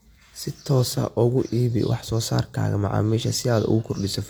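Nothing is technically wrong with this short speech clip.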